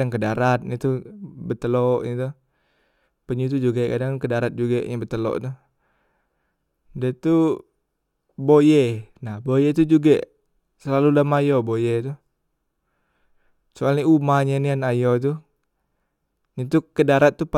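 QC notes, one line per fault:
Throughout, sample clock jitter: timing wobbling by a couple of microseconds adds hiss about 45 dB down, growing on loud, bright speech, gone in pauses.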